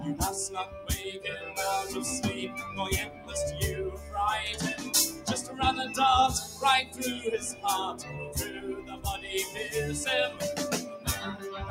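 A noise suppressor tuned for speech has been left on this non-speech audio, so it keeps reading steady tones and decaying tails as noise. Throughout, the level swings by about 10 dB. On a waveform, the envelope visibly pumps, and on a spectrogram, sustained bands thin and flicker while attacks stay bright. The clearest instances of sound cut by the noise suppressor fall at 0.65–0.89, 1.17–1.53, 3.07–3.35, 3.91–4.14, 7.97–8.36, 8.79–9.05 and 10.83–11.07 s. Each is a dip of about 6 to 10 dB lasting a fraction of a second, which shows as a sudden notch in the waveform and a darkened gap across the spectrogram.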